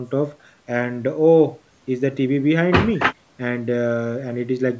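No technical faults can be heard in the speech: it has passed through normal call microphone processing, whose high-pass filter trims the lowest bass, and its content stops at about 8 kHz.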